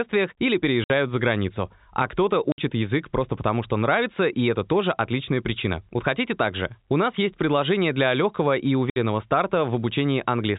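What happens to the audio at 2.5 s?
From 2.52 to 2.58 s the speech drops out completely for 60 ms, just before "язык просто потому что". This is packet loss filled with silence: the receiver got nothing for that stretch and played silence, and the length fits three lost 20 ms packets. Both edges are abrupt. Unlike concealment that repeats or fades the previous audio, this gap is dead silent, with no smeared echo of the sound before it.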